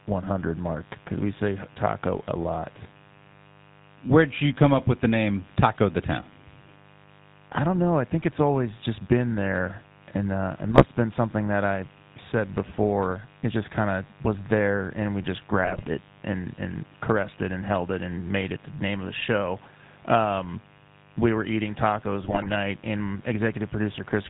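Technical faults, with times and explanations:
Throughout: mains buzz. A steady, raspy buzz sits under the speech, roughly 30 dB below it. It is built on 50 Hz, and sharp switching spikes twice per cycle spread its harmonics up into the kilohertz range. That gives it an edge rather than a smooth hum.
Throughout: GSM full-rate codec. The speech has a gravelly, buzzy roughness and nothing above 4 kHz. The coder models the vocal tract and drives it with sparse, regularly spaced pulses. The grain fits the 13 kbps full-rate coder and is plainly audible.
10.70–10.84 s, 15.65–15.84 s, 22.24–22.53 s: GSM bit errors. The speech breaks into squawks, pops and gargling after "there and uh it", after "there and we just", and after "we were eating tacos". Corrupted filter, pitch or gain values bend the spectrum or make the level jump for 6, 9 and 14 frames respectively.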